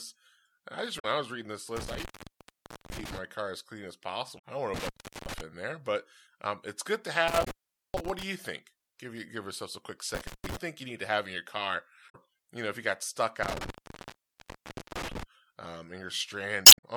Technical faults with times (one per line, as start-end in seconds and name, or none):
0.95-1.05 damaged data in a compressed stream
1.76-3.18 intermittent contact
4.35-4.39 damaged data in a compressed stream
4.74-5.41 intermittent contact
7.28-8.23 intermittent contact
7.41-7.47 damaged data in a compressed stream
10.15-10.57 intermittent contact
12.06-12.15 damaged data in a compressed stream
13.43-15.23 intermittent contact
16.63-16.84 damaged data in a compressed stream